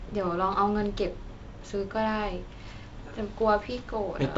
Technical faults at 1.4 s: none

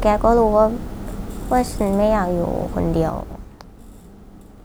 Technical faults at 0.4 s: none

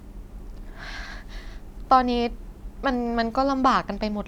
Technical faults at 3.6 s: none

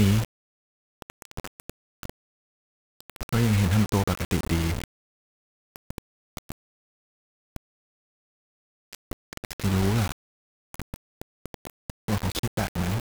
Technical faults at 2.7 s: low bit depth without dither

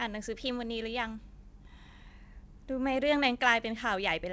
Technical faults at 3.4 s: none

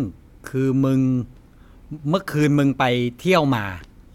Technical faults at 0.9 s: none

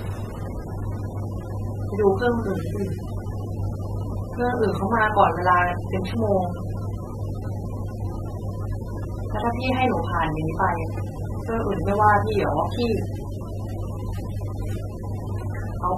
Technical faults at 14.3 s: AAC compression

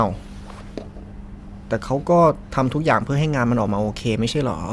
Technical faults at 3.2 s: none

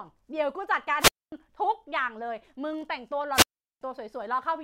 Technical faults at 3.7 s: wireless microphone squelch dropout

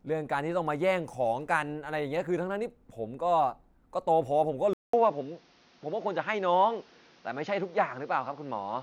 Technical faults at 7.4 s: input switched to a poorer device

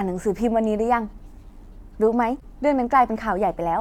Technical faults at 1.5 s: none

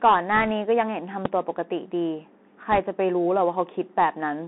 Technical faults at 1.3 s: Bluetooth CVSD headset codec; invalid numbers at full scale

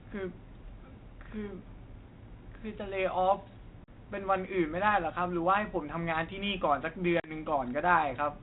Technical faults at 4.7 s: none

